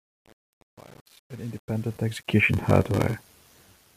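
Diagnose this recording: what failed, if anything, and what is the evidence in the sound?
Truncation distortion on a fade, 0.0 to 2.4 s, in the sample-format or digital gain stage. The speech fades in smoothly up to 2.4 s, but from the start to about 2.28 s the quiet part sounds gritty. The gain stage is rounding to very few levels without dither, consistent with roughly 8-bit resolution, so low-level waveforms collapse into coarse square steps until the level climbs clear.

Block size mismatch (padded), 2.53 s to the end, in the driver or buffer stage. A steady buzz at 93.8 Hz rides on the speech, and the speech runs slow at 0.861 times normal speed while the timbre stays. The reading stage fetches full blocks, consistent with 512 samples, but the writer supplies about 14% fewer, so each block's tail is padded with zeros. Those regular gaps create the block-rate buzz and stretch the timing.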